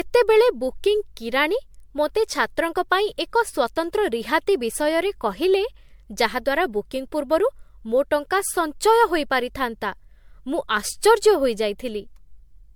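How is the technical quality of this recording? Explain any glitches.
The technical quality is compromised throughout by one fault, generation loss, audible across the whole speech clip. The sound is swirly and hollow, with a smeared, watery texture and softened consonant attacks, and content reaches up to about 20 kHz. The likely cause is repeated lossy re-encoding, roughly seven passes of MP3 at around 100 kbit/s. Each decode and re-encode quantises again on a shifted frame grid, so noise and spectral gaps pile up beyond what that bitrate alone would give.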